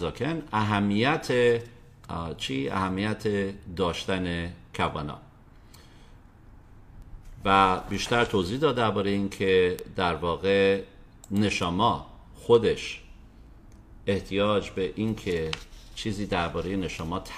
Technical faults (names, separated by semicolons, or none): word clock ticks